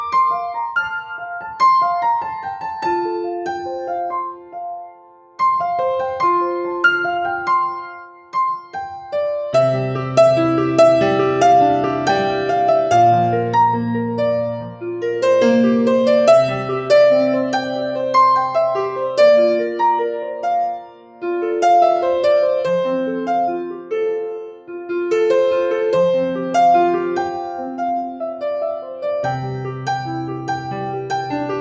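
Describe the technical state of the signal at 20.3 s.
At 20.3 s the signal shows sound cut by the noise suppressor from 20.27 to 20.44 s. The suppressor mistook this sound for noise and pulled it down by about 7 dB, so it sinks briefly. On the waveform the envelope dips; on the spectrogram that patch fades.

A speech-tuned noise suppressor is also applied to the sound throughout, its gain swinging by roughly 5 dB. It treats sustained content as noise, so the level pumps, visible as uneven envelope contours and a spectrogram that brightens and dims in patches. The call microphone path's 8 kHz ceiling appears as an empty band above it.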